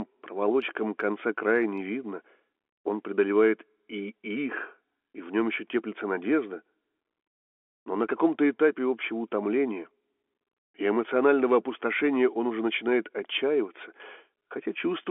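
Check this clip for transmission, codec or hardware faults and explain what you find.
Nothing wrong turns up in the speech, which carries the narrow band of an ordinary telephone line, roughly 300 Hz to 3.4 kHz, as expected from G.711 mu-law coding at 64 kbps working as intended.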